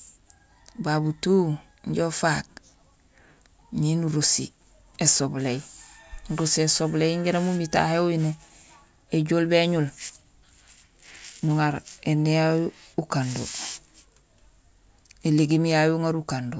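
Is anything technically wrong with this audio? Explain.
No, nothing technically wrong can be heard in this speech recording.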